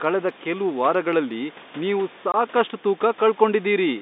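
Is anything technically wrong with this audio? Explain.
Yes. From 2.32 to 2.34 s the speech drops out for a moment, a 20 ms hole with hard edges where the waveform is cut off abruptly. This is packet loss filled with silence. Audio travelling over the network was lost, and the receiver played nothing in its place rather than concealing the gap. The hole's length fits two lost 10 ms packets. The room noise, about 21 dB below the speech, also vanishes inside the gap.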